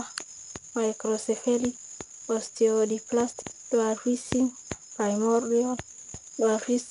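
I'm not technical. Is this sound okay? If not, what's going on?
No. The whole clip has been through 4-bit ADPCM compression, an old, cheap way of shrinking audio. Instead of storing each moment in full, it stores only a small guessed step from the previous one, and those rough steps leave a gritty hiss that rises and falls with the speech, loudest on the strongest sounds, with some roughness on sudden starts. Nothing above about 10.6 kHz survives, so the speech also sounds dull.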